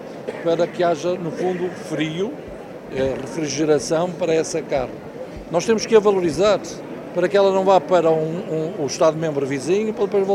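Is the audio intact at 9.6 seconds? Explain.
Yes, the audio is intact at 9.6 seconds, with no dropout, click, distortion or other fault at that moment.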